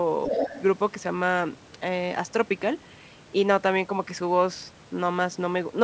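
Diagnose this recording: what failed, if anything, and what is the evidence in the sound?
The echo canceller in the call processing stage most likely failed to fully subtract the far end's loudspeaker playback from the microphone signal, so the other side's voice is leaking through. From 0.25 to 0.62 s a second voice sits under the talker, only slightly quieter. The whole clip stops at 8 kHz, which fits the wideband G.722 call path at 64 kbps and is not a fault.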